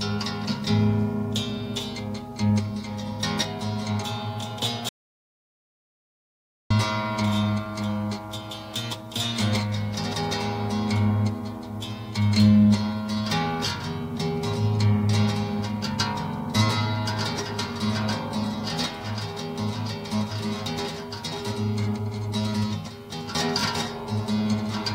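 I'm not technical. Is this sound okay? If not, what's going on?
No. At 4.89 s the audio cuts out completely and stays dead until 6.70 s, a gap of about 1.8 seconds. This is an audio dropout to silence. The input was likely lost for a moment, perhaps through a loose connection or a brief mute, while the recording carried on capturing nothing. Unlike a natural quiet pause, there is no faint background hiss at all, and whatever happened during that gap is missing for good.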